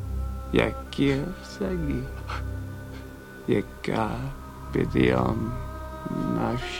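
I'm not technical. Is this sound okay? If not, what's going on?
Yes, nothing here sounds wrong; it's fine as it is.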